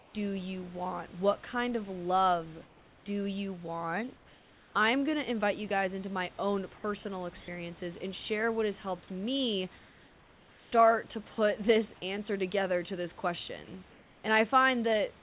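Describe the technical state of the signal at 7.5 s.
Comfort noise in place of the background occupies 7.4 to 7.48 s, a gap of 80 ms between "into my own personal" and "and share what has". The room background, sitting about 24 dB below the loud passages, gives way to a smooth, featureless hiss that shifts the level by only about 1 dB. This is likely discontinuous transmission: the sender paused, and the receiver filled the gap with synthetic noise roughly matched to the room until the sound resumed.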